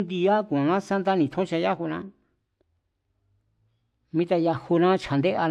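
Nothing goes wrong anywhere in this stretch of speech, so there's no technical fault to point out.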